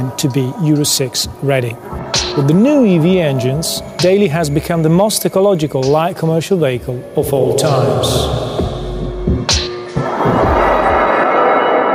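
Gain pumping runs throughout: background swells in gaps and ducks by around 5 dB under loud sounds, tracking level, unlike gating, likely an over-driven fast limiter.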